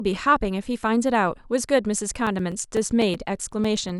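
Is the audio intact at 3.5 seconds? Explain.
No. At 3.5 s the speech sits inside a run of periodic USB or driver dropouts from 2.14 to 3.89 s: every 0.125 s a few milliseconds of audio drop to silence, giving evenly spaced ticks heard only under signal, unlike the irregular gaps of network packet loss.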